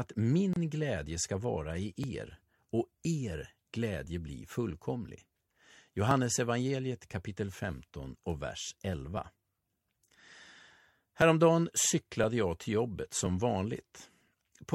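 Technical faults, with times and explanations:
0.53 to 0.56 s, gap at a join of encoded pieces. The speech stops dead for about 29 ms, just before "glädje ska vara", then resumes where it left off. The edges of the hole are smeared. Two separately encoded pieces were joined here without trimming. One piece's padded last frame and the next piece's start-up delay both stayed in. Together they leave a short silence inside continuous speech.
2.04 to 14.28 s, periodic USB or driver dropouts. Regular ticks recur about every 1.02 s, some fifteen in all. Each marks a loss of a few milliseconds of audio. The lost stretch is skipped, not filled, so the waveform jumps and clicks. The ticks are audible only while speech is present. Such even spacing points to a background task that blocks the USB bus or audio driver at a fixed interval.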